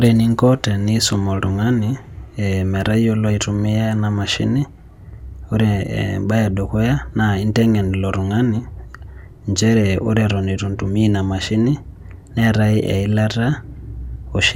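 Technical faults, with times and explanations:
Nothing stood out on listening to this speech recording; no technical problem could be heard at any point.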